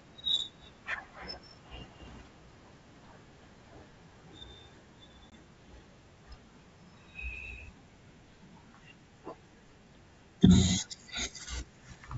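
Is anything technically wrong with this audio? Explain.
Yes. From 5.30 to 5.33 s there is packet loss on an ADPCM call. Roughly one packet of the stream went missing and was filled with silence, so the receiver's adaptive predictor and step size lost track of the sender's. The speech cuts to a hard-edged gap of about 20 ms, then comes back with brief, slight distortion before the decoder realigns. The surrounding wideband sound, consistent with G.722 at 64 kbit/s, keeps clear top end.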